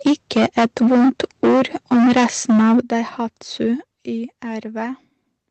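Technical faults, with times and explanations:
0.06–1.62 s and 1.92–2.8 s, microphone overload: The loudest syllables crackle with a harsh, flattened edge, worse in the second stretch. The likely cause is input gain set roughly 11 to 12 dB too high, so about a fifth, then two fifths, of the samples are cut off at the converter's ceiling.
0.07 s, 2.82 s and 3.84 s, microphone volume stepped down: Voice and background abruptly drop together, by about 2 dB, then about 9 dB right after the second distorted stretch, then about 6 dB. The likely cause is call software lowering the device's input volume in single steps after detecting clipping.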